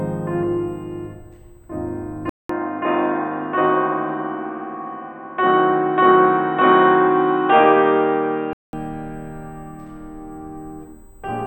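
Right from the start of this music there's a USB whine, a thin fixed tone at 8 kHz, strongest at its 16 kHz harmonic, sitting very roughly 40 dB under the music. That's the bus's 125-microsecond microframe rhythm leaking in through power or ground.

At 2.29 s the sound drops out for about 200 ms, then comes back dull and boxy, with nothing above 3.8 kHz and a faint new noise floor, while the overall level stays about the same. It clears up again at 8.73 s. That's likely the input switched to a poorer device.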